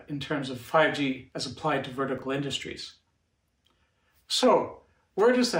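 At 2.18 to 2.22 s, two 20 ms chunks play in the wrong order. The block that belongs first arrives one chunk late and plays after its successor. No audio is lost, but the swap creates three hard joins in 40 ms, heard as a brief jumbled flutter. On the waveform, the shape jumps abruptly at each joint. A spectrogram shows thin vertical broadband lines there, with the short segments visibly transposed.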